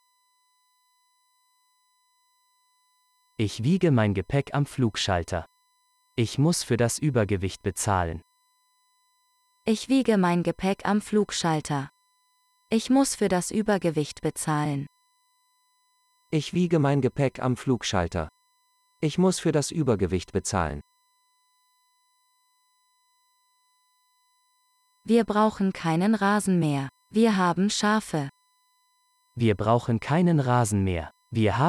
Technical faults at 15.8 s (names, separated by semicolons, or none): USB whine